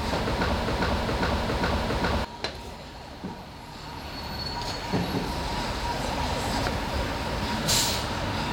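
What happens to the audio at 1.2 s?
At 1.2 s the audio is inside a broken-record loop running from 0.62 to 2.25 s: a 0.41 s fragment repeats four times back to back, likely because playback stalled and kept resending the last buffered piece, so the intended audio is lost.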